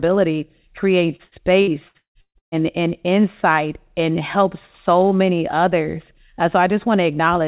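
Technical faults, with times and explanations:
1.16–2.55 s: repeated packet loss (robotic sound). Seven gaps, the longest 174 ms, each patched by prolonging the last sound, leave about half the stretch concealed and choppy until "and insight and helps". Unlike a single dropout, the holes keep recurring. The sound stops at 4 kHz, which fits a G.711 call path.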